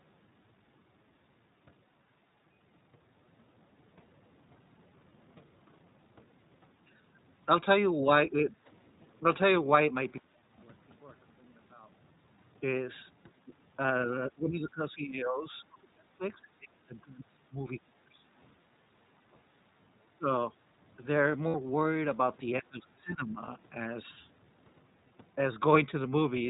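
iLBC codec, throughout: the sound is narrowband, with nothing above 4 kHz, and plainly rough and synthetic, consistent with the 15.2 kbps mode coding each 20 ms frame independently.

Background gated by the echo canceller, 8.53 to 8.67 s: the room sound dips by about 8 dB for roughly 150 ms while the canceller clamps the microphone during loudspeaker playback.

One channel inverted, 10.18 to 12.36 s: the mono sum drops by about 23 dB to a faint leftover. The likely cause is reversed polarity on one channel, so the shared centre content cancels.

Background gated by the echo canceller, 10.29 to 10.58 s: inside that stretch, the background falls by 10 dB or so for about 0.3 s, then returns when the canceller releases.

Speech suppressed in double talk, 14.06 to 17.53 s, 17.74 to 18.22 s, 20.15 to 20.27 s and 22.6 to 23.43 s: the talker's level collapses by around 20 to 25 dB. The likely cause is the echo canceller ducking both directions when both sides spoke at once. 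The longest dip lasts about three seconds.

Lost iLBC frames, 21.48 to 21.54 s: a 60 ms gap, which fits three lost 20 ms frames, is filled with a held, faintly buzzy repeated pitch cycle, and the voice comes back right almost at once afterwards.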